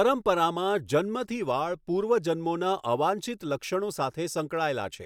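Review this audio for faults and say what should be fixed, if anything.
Nothing needs fixing here.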